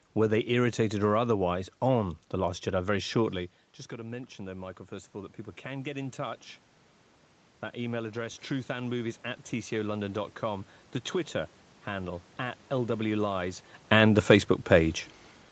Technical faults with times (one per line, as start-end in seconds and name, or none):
3.96-6.49 automatic gain rising
7.72-10.76 automatic gain rising